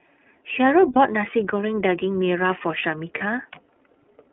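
Speech heard through a narrow, slightly rough and synthetic-sounding telephone band, with nothing above roughly 3.4 kHz and thin lows below about 250 Hz. This is the iLBC codec's damage, plainly audible, and the character fits its 13.33 kbps mode, which codes each 30 ms frame independently. At 0.93 to 0.97 s and again at 3.18 to 3.22 s, the sound briefly turns into a held, faintly buzzy tone. These are lost iLBC frames, a single 30 ms frame each time, which the decoder filled by repeating the last pitch cycle blended with noise. Because each frame stands alone, the speech recovers immediately afterwards.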